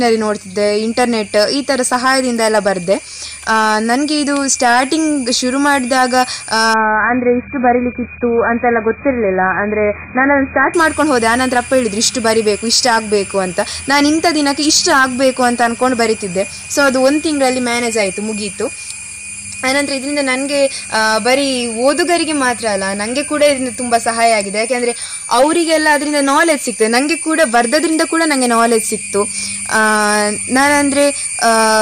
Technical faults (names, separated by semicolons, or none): hard clipping; adaptive stream at a lower bitrate